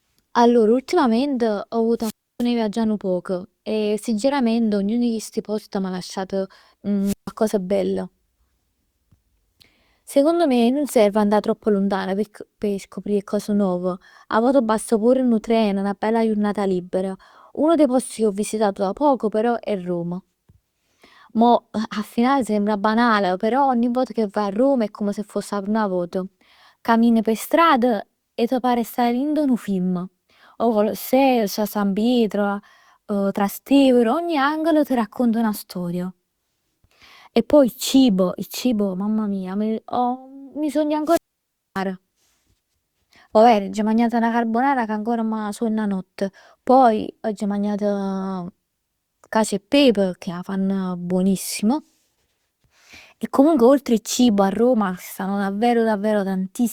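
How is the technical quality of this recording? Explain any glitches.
The speech is interrupted three times by wireless microphone squelch dropouts: at 1.98–2.46 s (muted about 0.30 s), 7.02–7.32 s (about 0.15 s) and 41.05–41.82 s (about 0.59 s). Each time the radio signal fades, hiss rises, the receiver's squelch cuts to silence, and the voice returns. That brief swell of static before the gap distinguishes it from a digital packet dropout, which cuts off cleanly.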